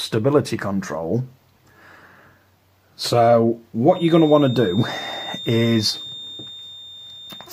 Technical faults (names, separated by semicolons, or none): feedback whistle